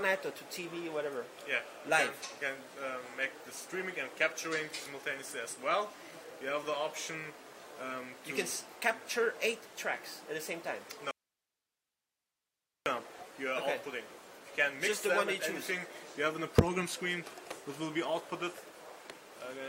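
An audio dropout to a faint residue runs from 11.11 to 12.86 s. The sound cuts out abruptly for about 1.75 s. Only a low hiss remains, far below the normal level. The signal was likely lost upstream while the later path stayed live.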